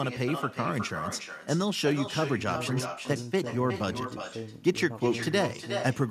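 With no echo canceller on the far end, the loudspeaker's output is picked up by that microphone and sent back. Throughout the speech, every phrase returns about 9 dB quieter, roughly 0.4 seconds later, as a thin shadow trailing the talker.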